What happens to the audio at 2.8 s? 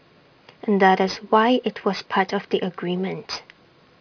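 Aliasing at 2.8 s, as everywhere in the clip. The downsample from 16 kHz to 11 kHz skipped filtering, so energy above 5.5 kHz folds back and makes the sibilants sound gritty and metallic.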